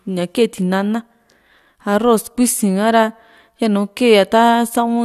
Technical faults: none

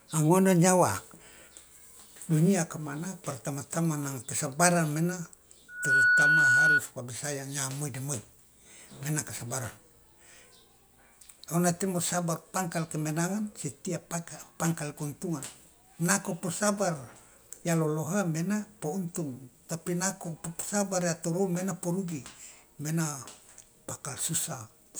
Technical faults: loudspeaker feedback squeal

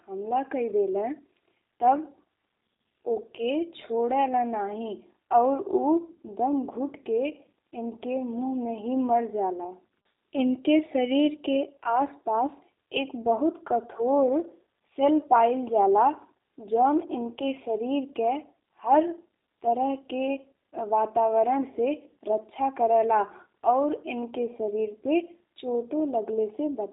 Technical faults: G.729 codec

